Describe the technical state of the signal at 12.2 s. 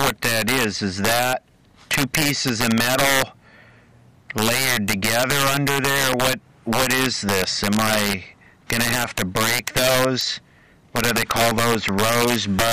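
Integer overflow is present at 12.2 s, as it is across the whole clip. The signal is driven about 6 dB past the integer limit, and instead of being clamped, each peak wraps to the opposite extreme. A small fraction of samples, around 2 percent, flip this way, heard as violent cracks on the loudest moments, far harsher than clipping.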